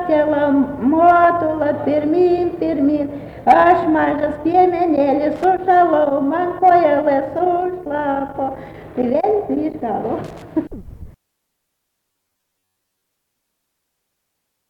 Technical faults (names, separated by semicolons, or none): loose connector crackle; robotic sound from repeated short buffers